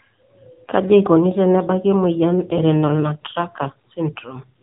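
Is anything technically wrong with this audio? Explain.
Yes. Throughout the speech the sound is thin, boxy and audibly synthetic, with a buzzy edge and nothing at all above about 3.8 kHz. This is the AMR narrowband mobile codec: the audio is reduced to 8 kHz sampling and rebuilt from a vocal-tract model excited by a few pulses per 5 ms subframe. The plainly audible damage fits a low AMR-NB mode of around 7.4 kbps, where too few bits leave the speech buzzy and artificial.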